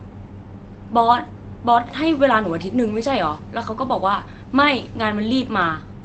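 A speech recording with no technical fault to be heard. It has passed through a WebRTC call path working as intended, and its top end stops around 8 kHz, which fits Opus coding at a modest bitrate, roughly 24 kbps.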